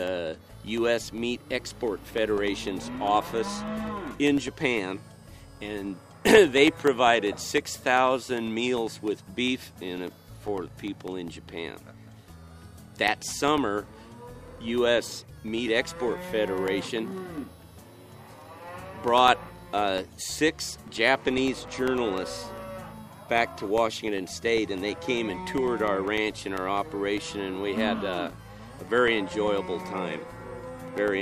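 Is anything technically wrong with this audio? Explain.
Yes. From 0.08 s to 31.08 s a regular tick sounds every 0.1 s, ten times a second, audible only while there is signal. These are periodic USB or driver dropouts: something stalls the audio path on a fixed cycle, and each time about a millisecond of audio is lost and replaced by silence.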